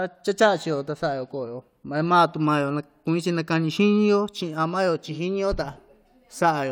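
A speech recording with nothing technically wrong with it.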